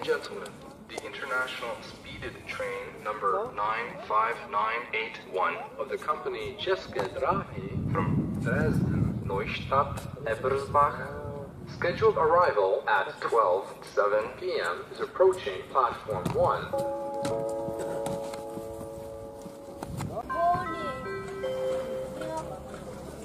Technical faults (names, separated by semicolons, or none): none